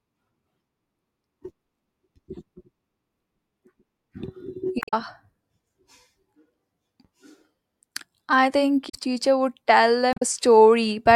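Short blips break into the speech at 4.79 to 4.94 s, just after "I think" at 8.86 to 8.95 s, and at 10.11 to 10.22 s. This is damaged data in a compressed stream: corrupted bytes make the decoder misread frames and lose sync until it finds the next valid header.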